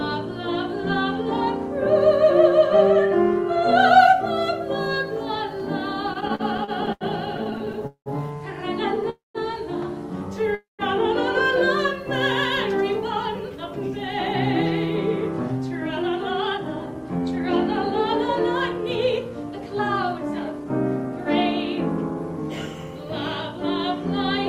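From 6.07 to 8.09 s, repeated stalls (stutter): late packets kept emptying the jitter buffer, so the last sound is stretched in many short gaps, the longest 193 ms. About a quarter of that span is filled audio, so it drags and stutters. At 9.10–9.38 s and again at 10.55–10.82 s the sound hangs as a fading buzz or hiss for about a quarter second, ending in roughly 150 ms of silence, then resumes where it stopped. The likely cause is a call audio freeze from held-up packets. From 13.26 to 17.90 s and 18.61 to 22.20 s, a jitter buffer speed-up trims short pitch-period pieces to shed excess delay, roughly 0.3 s each time. The audio runs 7% fast and sounds hurried at unchanged pitch.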